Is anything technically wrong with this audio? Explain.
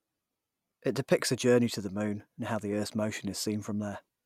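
No, nothing technically wrong turns up in this recording; it all sounds as it should.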